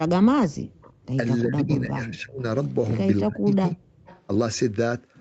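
From 0.04 to 0.57 s, 1.44 to 2.46 s, 3.22 to 3.81 s and briefly at 4.0 s, the echo canceller likely mistook double talk for echo and turned the talker down. This is speech suppressed in double talk: the speech dips by up to about 35 dB, fading or breaking away in pieces.

At 0.82 to 1.06 s and 4.06 to 4.26 s, a loudspeaker echo likely escaped cancellation. This echo leak returns a faint copy of the speech 324 ms late, about 25 to 30 dB below it.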